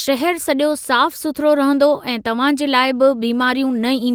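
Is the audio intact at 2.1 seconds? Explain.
Yes, the speech at 2.1 seconds plays through cleanly, with no dropout, click, distortion or other fault at that moment.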